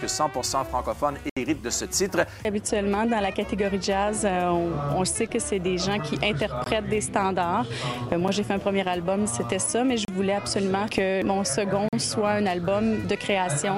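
The audio drops out five times in a block of digital silence, with the signal cut off hard and restored with no fade. The holes fall at 1.30 s (71 ms), 6.64 s (21 ms), 8.28 s (a 6 ms tick), 10.05 s (32 ms) and 11.89 s (43 ms). The 21 ms and 43 ms gaps fit one and two 1024-sample buffers, pointing to output buffers not filled in time.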